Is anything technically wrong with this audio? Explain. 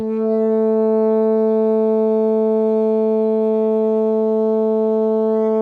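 No, nothing technically wrong can be heard here.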